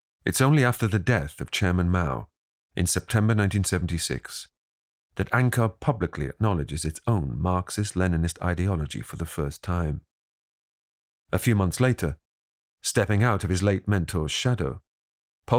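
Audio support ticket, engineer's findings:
No audible faults found in the speech recording; nothing to trace to any component.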